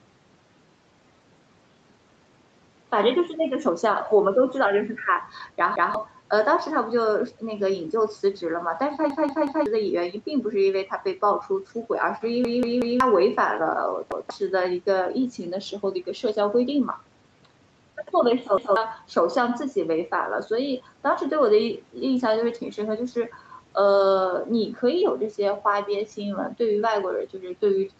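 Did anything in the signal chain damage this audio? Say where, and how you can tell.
Yes. At the driver/buffer stage, the playback device ran dry five times and replayed its last buffer: a single extra play at 5.76–5.94 s, 14.12–14.30 s and 18.58–18.76 s, and three extra plays at 9.10–9.66 s and 12.45–13.00 s. Each repeat is a hard-joined copy of about 186 ms of speech, which fits an 8192-sample buffer. The result is audible stutters that drop roughly a fifth to half a second of audio each time.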